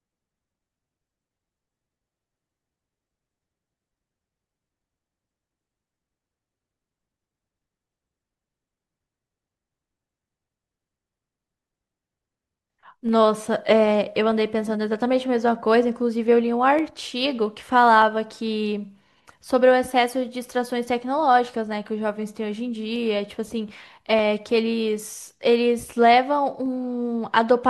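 From 0.74 s to 26.66 s, a click recurs steadily every 1.23 s across the speech, about twenty times in all. The even spacing points to clock drift buffer slips, likely caused by two devices running on separate clocks that disagree by roughly 150 parts per million. The buffer between them slowly drifts until a few samples are dropped or repeated, and each of those slips is heard as a tick.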